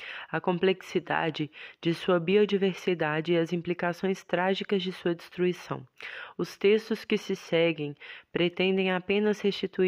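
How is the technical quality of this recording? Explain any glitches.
No dropouts, clicks, distortion or other glitches are audible anywhere in the recording.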